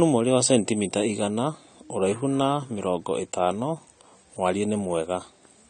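Throughout the speech, the likely cause is AAC compression at a low bitrate: coarse quantisation consistent with AAC-LC at around 32 kbps. Nothing survives above 9 kHz, so the sound is dull and smeared, with plainly audible warbling on sustained sounds and sibilants.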